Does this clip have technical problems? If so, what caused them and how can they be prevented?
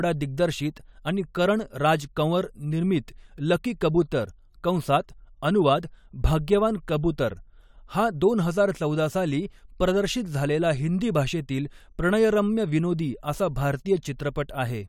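No, the recording shows no technical problems, so there is nothing here to trace back to a cause or to prevent.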